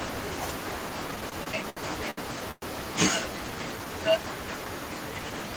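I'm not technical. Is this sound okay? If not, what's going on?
No. Between 1.11 and 2.64 s there are repeated stalls (stutter): the audio data kept arriving late, so playback briefly ran dry about ten times. The speech hesitates and drags there, with pauses of up to about a tenth of a second, but nothing is lost.

From 3.32 to 3.57 s there is a jitter buffer slow-down: the receiver was rebuilding its reserve, so it stretched the speech to about 85% speed. That part sounds drawn out without any change in pitch.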